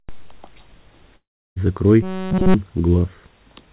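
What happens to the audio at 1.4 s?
At 1.4 s you're in the middle of a gap running from about 1.16 to 1.58 s, most likely a long network dropout. Roughly 0.4 s of audio never arrived, so the receiver stretched the last sound into a fading buzz before dropping to near silence for about a third of a second. The sound then picks up again with the lost part simply gone, still band-limited at 4 kHz as on a narrowband call codec.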